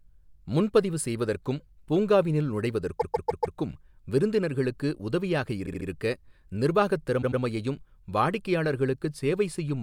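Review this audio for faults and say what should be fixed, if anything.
Repeated frames stutter the speech at 2.99–3.57 s, after "முன்பதிவு செய்வதற்கும் பூங்காவினுள்", then at 5.65–5.87 s and 7.21–7.41 s. Blocks of 144, 72 and 96 ms replay several times, lengthening the audio rather than leaving gaps as dropouts do. Checking frame sequence numbers before writing would reject the duplicates.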